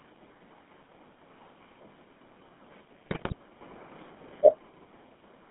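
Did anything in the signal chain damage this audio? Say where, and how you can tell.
Yes. At the codec stage, GSM full-rate coding runs throughout: the audio is confined to roughly 150 Hz to 3.5 kHz, with the buzzy, gravelly texture of pulse-driven vocal-tract synthesis at about 13 kbps.

At the network stage, GSM bit errors hit from 3.06 to 3.34 s, producing squawks and gargling as corrupted filter, pitch and gain parameters distort successive decoded frames.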